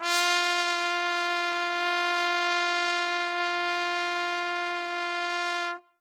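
A music clip in which the tones sound grainy, rough and noisy throughout, with a papery, hissing texture where clean harmonics should be, though the top end still reaches to about 20.4 kHz rather than sounding muffled. The damage is plainly audible and likely comes from Opus compression in its music (CELT) mode at a low bitrate, around 16 kbps, where the encoder keeps each band's energy but has too few bits for detail, so it fills the gaps with folded copies of lower bands or with noise.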